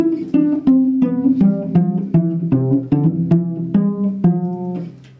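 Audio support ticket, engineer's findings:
Gain pumping throughout: loud and soft parts close in level, sound squashed. Likely input gain far too high with fast limiter clamping, roughly 15 dB swing. Waveform: flattened peaks, compressed dynamics.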